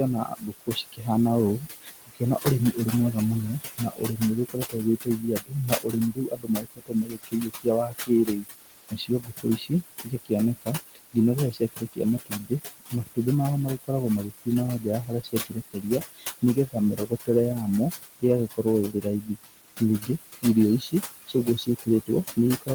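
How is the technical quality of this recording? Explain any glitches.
The recording is marred by noise suppression, which both leaves artifacts in the background and clips parts of the speech itself, over room noise sitting only about 9 dB below the talker.

Noise suppressor artifacts run through the whole clip. The suppressor pulls down bands it judges to be steady noise by about 16 dB, frame by frame, so the background dips between phrases and swells under them.

Speech cut by the noise suppressor appears at 0.25–1.06 s, 1.6–2.77 s, 3.78–13.18 s (the longest, with about three seconds affected in total), 14.45–17.29 s and 18.01–22.69 s. Here the suppressor mistakes quiet speech for noise and drops it by about 20 to 21 dB, so soft consonants and word endings sound swallowed, rather than the background merely warbling.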